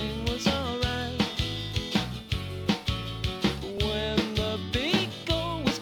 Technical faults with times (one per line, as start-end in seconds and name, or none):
3.78 repeated buffer